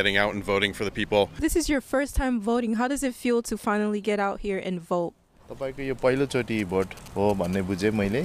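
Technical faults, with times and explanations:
6.59 to 7.55 s, GSM signalling bursts: a galloping dit-dit-dit of ticks and short buzzes, roughly 15 dB below the programme, built on a 217 Hz repetition rate. A nearby 2G handset is exchanging brief signalling traffic, and the audio circuitry rectifies its radio pulses into audible clicks. It differs from steady mains hum or the continuous buzz of an active call because it arrives in irregular clustered groups and then stops after about a second.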